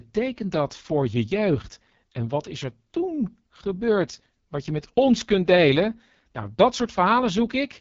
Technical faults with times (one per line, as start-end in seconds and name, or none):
0.00-7.81 AMR wideband (HD Voice) codec